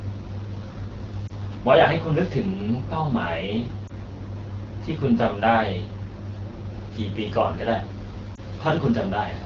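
Throughout the recording the speech carries the signature of the AMR wideband (HD Voice) codec at a low mode. The coder models the vocal tract and drives it with sparse pulses up to 6.4 kHz, then fills the top band to 7 kHz with shaped noise. Here the result is a plainly rough, raspy texture, which points to one of the two lowest AMR-WB rates, around 8.85 kbit/s.

Three brief dropouts interrupt the speech at 1.27 to 1.32 s, 3.87 to 3.92 s and 8.35 to 8.39 s. Each is a lost AMR speech frame. The decoder found a corrupted frame and concealed it by repeating the previous pitch and vocal tract parameters at reduced gain. Each gap sounds like a short dip or warble in level, and its length fits a single lost 20 ms frame.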